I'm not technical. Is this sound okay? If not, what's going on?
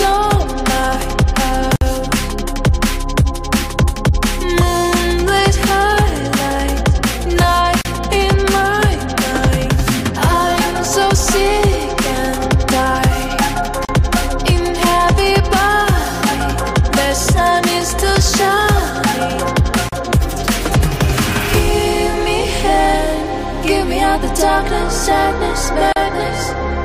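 No. There is a gap at a join of encoded pieces at 1.76, 7.81, 13.85, 19.89 and 25.93 s, repeating every 6 s. The sound was saved as separate chunks and stuck together untrimmed, so each seam leaves a brief silence (56 ms first, then 37 ms) before carrying on.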